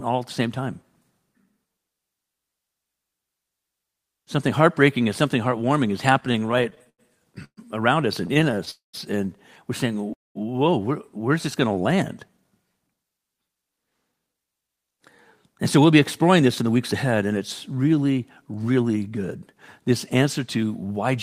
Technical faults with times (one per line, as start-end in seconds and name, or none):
6.13-7.00 repeated stalls (stutter)
7.44-7.59 call audio freeze
8.27-8.69 repeated stalls (stutter)
8.71-8.95 call audio freeze
10.13-10.37 call audio freeze
12.28-14.99 jitter buffer speed-up
15.49-16.93 jitter buffer speed-up